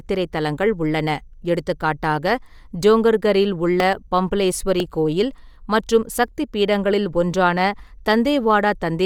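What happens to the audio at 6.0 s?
At 6.0 s the speech carries the same grainy, breathy edge heard across the whole clip, which is likely Bluetooth LC3 compression. A transform codec like this, working in 10 ms frames at a rate around 48 kbps, strips fine detail from the upper spectrum and patches it with shaped noise. Unlike a plain band-limited codec, the top end still reaches about 20.2 kHz; it is roughened there, with nothing above that point.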